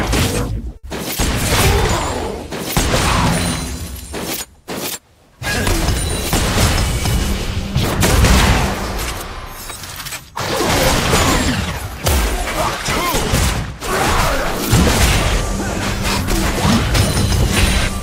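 At 0.77 to 0.85 s, a short stall from a late packet: the jitter buffer ran dry, so the last sound is stretched about 60 ms before playback resumes intact.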